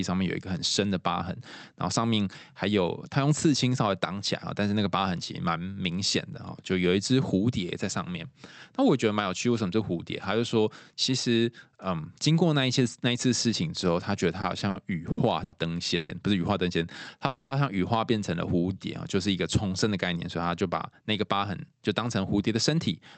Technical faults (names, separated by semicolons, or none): repeated stalls (stutter); call audio freeze; jitter buffer slow-down; jitter buffer speed-up